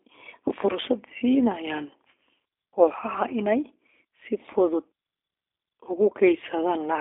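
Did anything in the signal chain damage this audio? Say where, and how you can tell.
Yes, at the codec stage, throughout the speech: this is G.729 coding damage. The sound is plainly rough and slightly synthetic, the way speech sounds when it is rebuilt from a vocal tract filter, a pitch predictor and a few pulses per subframe rather than its real waveform. The rate fits an 8 kbit/s G.729A stream. On a spectrogram the band sits between 150 Hz and 3.5 kHz, with nothing above 3.6 kHz.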